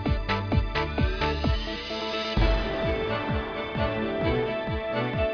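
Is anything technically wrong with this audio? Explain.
No, nothing is technically wrong with this audio.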